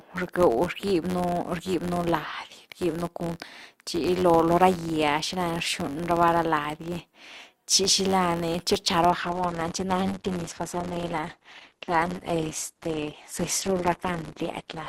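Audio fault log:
Throughout, filter restarted on every block: a steady buzz at about 93.8 Hz rides under the speech, rising and falling with its level. The filter loses its memory at each block boundary and starts from silence, so every block opens with a small transient. The rate fits a 512-sample buffer. On a waveform, tiny regularly spaced glitches appear; a spectrogram shows faint vertical lines at even intervals, plus a harmonic comb from 93.8 Hz.
9.11 to 14.88 s, adaptive stream at a lower bitrate: the sound abruptly loses its treble, with more codec artefacts and no gap at the switch. The stream dropped to a much leaner encoding, consistent with a fall from around 64 kbit/s Opus to around 12 kbit/s. A spectrogram shows a sharp ceiling with nothing above 12.1 kHz from 9.11 s on, and blurrier, blockier detail below it.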